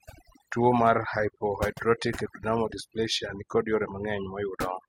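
Speech with overdone noise removal across its whole length. The noise reduction stage was set so hard that every frequency band near its noise estimate is pulled far down or switched off, taking the quieter parts of the voice along with it. The result is a background sunk to near silence and sprinkled with twinkling specks, with the voice's low-level detail stripped out. Two short bursts of DAB burbling sit on top of this, at 0.41 to 0.48 s and at 3.86 to 3.92 s. Both come from bit errors slipping past the DAB error correction into the MP2 audio data, where corrupted samples put short blips of noise into single sub-bands and corrupted scale factors make sub-bands jump in level for up to a frame. The second burst sounds denser, which fits more frames being corrupted and an error rate of roughly a fifth of a percent, against about a tenth of a percent for the first.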